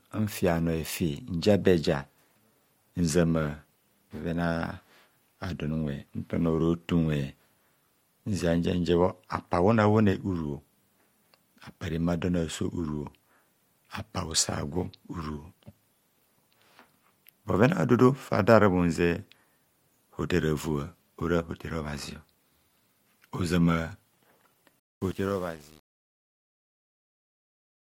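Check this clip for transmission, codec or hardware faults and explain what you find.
One fault is present, a fade-related hardware or processing fault.

Truncation distortion on a fade, 24.79 to 27.81 s: the fade keeps only 8 bits with no dither, so the dying speech turns into coarse steps and sounds gritty.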